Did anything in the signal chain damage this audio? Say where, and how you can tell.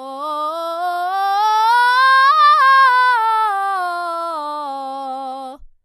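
No, nothing in the signal chain damaged this music.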